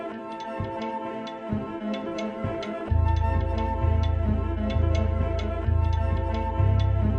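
The whole music track sounds dull and gurgly, with upper bands flickering out. That's likely MP2 compression starved of bits, something around 80 kbps. From 2.37 to 2.89 s there's DAB burbling: stray bit errors, maybe a couple per thousand, slipped past error correction, so single sub-bands blip and jump about in level.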